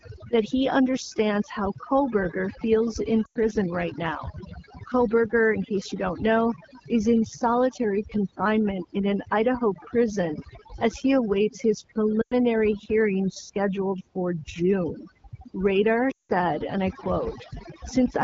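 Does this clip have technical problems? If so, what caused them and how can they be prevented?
Yes. Overdone noise removal runs through the whole speech clip. The noise reduction was set too aggressively. It pushes individual frequency bands down or off whenever they sit near its noise estimate. The background drops and breaks up into twinkling specks. Quiet parts of the voice get pulled out too. To prevent it, use a gentler reduction setting and keep some natural background.

Lost AMR speech frames cause three short breaks. The first runs from 3.25 to 3.37 s, between "feels in" and "right now". The second runs from 12.21 to 12.34 s, between "as he awaits his" and "hearing scheduled for". The third runs from 16.11 to 16.32 s, just before "and I". The wideband AMR decoder covered each gap by repeating its last good pitch and vocal tract settings. Their gain fell, so the sound smears and sags. 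The first two gaps last about 100 ms, which fits five 20 ms frames. The last lasts about 180 ms, which fits nine, so it lasts longest. To prevent it, improve radio link quality and error protection on the call.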